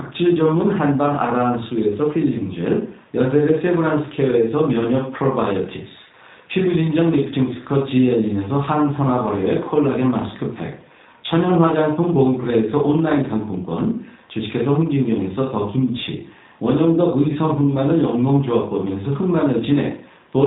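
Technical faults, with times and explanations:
Throughout, G.729 codec: the speech is resynthesised from a vocal-tract filter, a pitch predictor and sparse pulses per 5 ms subframe rather than the waveform itself. That makes it plainly rough and synthetic, with nothing above 4 kHz, which fits an 8 kbit/s G.729A stream.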